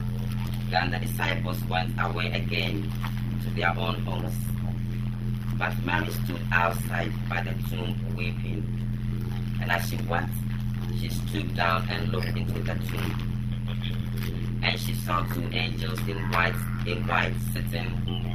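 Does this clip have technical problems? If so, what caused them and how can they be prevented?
Yes. Throughout the clip there is overlap-add ripple. The audio was split into windowed frames and rebuilt with an overlap whose windows don't add up to a constant gain. The level therefore swings by about 60 dB once per frame, around 100 times a second, producing a metallic buzz with extra tones around each note. It can be prevented by matching the window shape to the hop size so the overlapped windows sum flat, for example Hann windows at 50 percent overlap.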